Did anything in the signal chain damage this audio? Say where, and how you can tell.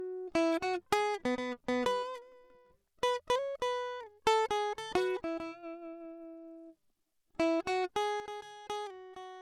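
Yes. From 8.2 s, music and noise floor drop together by about 8 dB: a sudden gain jump, likely an unramped digital gain step in processing.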